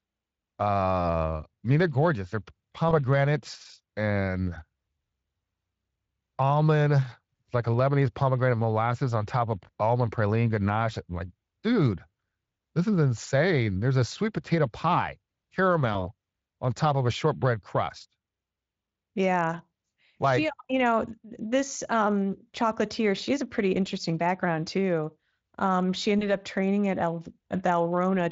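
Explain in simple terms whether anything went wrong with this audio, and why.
Three brief hiccups come from VoIP packet loss concealed by the speech codec. At 2.89 s, at 15.93 s just before "on top of a", and at 26.19 s just before "training at", a single 20 ms chunk of data went missing. Each time the decoder filled the gap by stretching the last sound into a short buzzy or noisy smear that then faded. Unlike a plain dropout, there is no silence. The speech stays weak or warped for a moment after the data returns. The light Speex coding underneath plays no part in these glitches.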